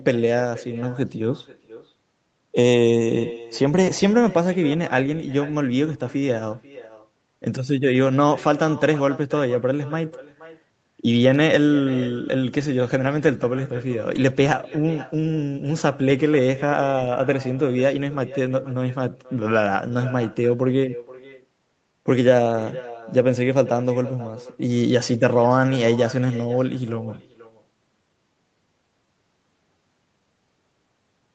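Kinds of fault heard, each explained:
Echo with no canceller: The far end's loudspeaker feeds its microphone unchecked, so every phrase returns roughly half a second later, about 18 dB quieter and thin.
Clock drift between sender and receiver: The sender's clock runs roughly 1.5% slow, so the receiver's buffer keeps draining and small timing hiccups recur unevenly through the whole clip.
Repeated timing corrections: The receiver keeps stretching the audio to cover the slow sender, running at 99% speed and adding roughly 400 ms.
Scattered short gaps: About seven tiny packet losses between 14.16 and 23.49 s were patched by extending the last sound, leaving brief ticks or slight smears.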